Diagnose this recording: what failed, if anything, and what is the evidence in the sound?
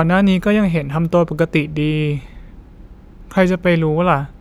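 Nothing in the chain has failed here: the speech signal stays continuous and steady in level throughout, with no audible disturbance from any stage between capture and playback.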